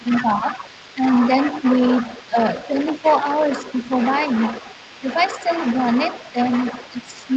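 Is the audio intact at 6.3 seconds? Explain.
No. From 6.32 to 6.37 s, for about 50 ms, the speech dips by roughly 10 dB, likely speech suppressed in double talk, where the echo canceller, unable to separate the talker from loudspeaker echo, turned both down. This is a brief level dip rather than a clean dropout to silence. Under it, as through the whole clip, the other side's voice is leaking through, roughly 10 dB below the speech, likely residual echo the canceller missed. It is a second, quieter voice rather than noise.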